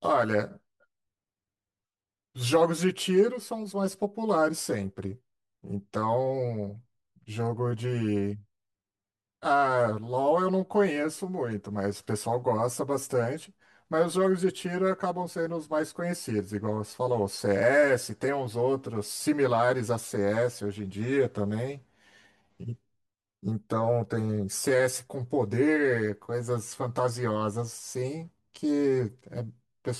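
Speech, and from start to finish it has that hollow, phasey character you get from channel delay (comb filtering). One side lands roughly 10 ms behind the other, so in the mono sum the shared sound cancels in evenly spaced notches starting around 50 Hz.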